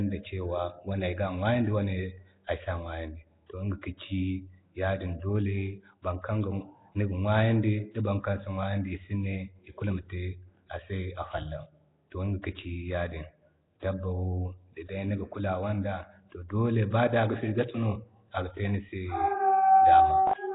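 A speech clip with heavy codec damage throughout. Nothing is heard above 3.8 kHz, with a rough, hissy halo and a smeared, underwater tone. The likely cause is Nellymoser compression at a rate that fits about 16 kbps. At 3.82 s a pre-echo appears. A brief hiss of about 15 ms comes just before a sharp attack, which sounds softened. The codec spreads its noise across the block, including the quiet moment before the attack.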